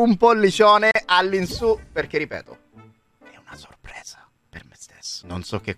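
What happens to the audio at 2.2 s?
Nothing goes wrong at 2.2 s; the audio plays through that moment intact, with no dropout, click or other fault.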